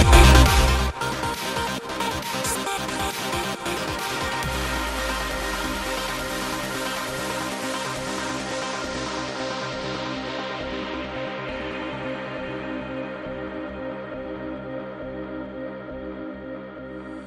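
Nothing here sounds wrong; there are no glitches, dropouts or other technical problems anywhere in the audio.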